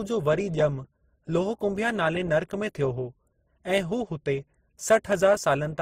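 Speech carrying the layered smearing and swirly, watery texture of transcoding between lossy codecs throughout, likely a low-rate MP3 re-encoded as Opus. A spectrogram shows nothing above 19.2 kHz and blotchy, patchy high-frequency detail from both codecs stacked together.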